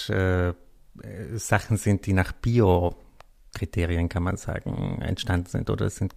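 No technical faults can be heard anywhere in this speech recording. Nothing in the signal chain calls for comment at any point.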